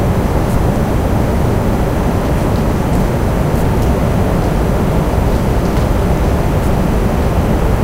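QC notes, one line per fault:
No faults to note.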